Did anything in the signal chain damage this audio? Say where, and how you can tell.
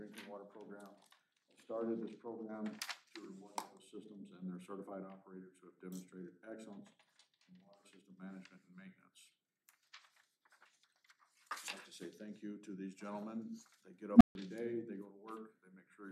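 Yes: an unstable filter in the processing stage breaks the sound from 14.14 to 14.35 s. A low tone of around 200 Hz swells from nothing to clipping in about 70 ms, then the output drops to silence for 145 ms before the audio resumes. A recursive filter with bad coefficients fed back more than it passed, so its output grew until it overflowed and reset. On the waveform this is a fast-rising envelope slammed into clipping, then a flat line; the spectrogram shows a bright narrow low band ending in a blank gap.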